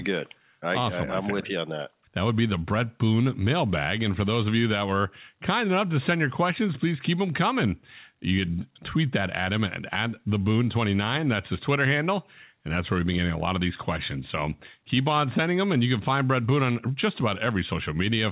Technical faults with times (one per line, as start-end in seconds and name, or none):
none